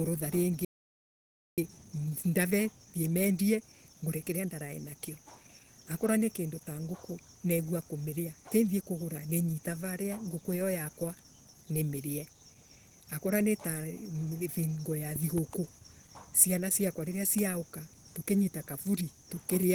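From the start to the end, the speech carries a hoarse, grainy coarseness with a muffled edge, which is likely Opus compression. The damage is plainly audible and fits the codec's hybrid mode at a low rate, around 16 kbps. Energy still reaches across the full band, so the band isn't cut short. On a spectrogram the upper region looks smeared and noise-filled instead of finely harmonic, with no clean gaps opening up.

At 0.65 s the speech breaks off mid-flow and the output falls silent until 1.58 s, a gap of about 0.93 s. This is a playback stall, most likely from the player running out of buffered data or having its thread held up. The waveform shows a flat line across that stretch. On a spectrogram it appears as a blank vertical band cutting cleanly through the ongoing speech.

From 1.58 s to 4.58 s the speech runs hurried at 1.1 times normal speed while the pitch stays put. This is time-compressed catch-up, where the player trims its backlog by removing short slices and cross-fading the joins. 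Harmonic spacing on a spectrogram is unchanged, but syllables sit closer together, with small discontinuities where segments were spliced.

Between 15.16 s and 15.40 s two loud pops land in quick succession, peaking a few decibels above the speech, which continues underneath. They were likely caused by a sudden voltage step or driver glitch entering the signal chain. The waveform shows two sharp spikes standing above the surrounding envelope. On a spectrogram each one is a thin vertical line spanning the whole frequency range.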